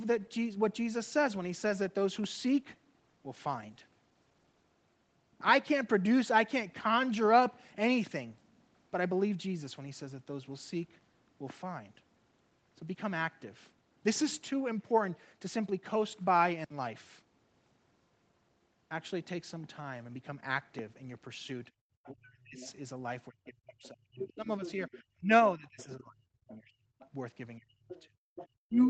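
From 21.98 s to the end, the main speech dips unevenly, thins out and breaks into pieces, falling by roughly 30 dB at its deepest. This is speech suppressed in double talk, likely because the echo canceller could not separate the near talker from loudspeaker echo and turned both down. Unlike a dropout, the loss follows the overlapping talk.

Within that stretch, the other side's voice leaks through: a faint second voice at 22.05–22.73 s, about 20 dB under the speech, then louder from 23.83 to 28.47 s, around 15 dB down. The likely cause is echo the canceller left in the microphone signal. It is a separate voice, not a distortion of the main one.

At 28.17–28.35 s the room sound itself drops by about 35 dB for roughly 0.2 s and then returns. This is background gated by the echo canceller, a brief hard mute of the ambience rather than a dip in the speech.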